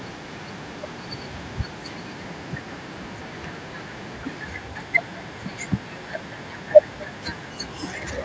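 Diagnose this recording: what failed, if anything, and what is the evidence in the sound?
The echo canceller failed, or there wasn't one: this is echo with no canceller, running the whole way through the speech. Every phrase is trailed by a faint, thin copy around a fifth of a second later, sitting about 29 dB under the direct sound. The far end is playing the call on a loudspeaker, its microphone picks that back up, and the return crosses the network again. The band-limiting to 8 kHz is just the normal call microphone processing.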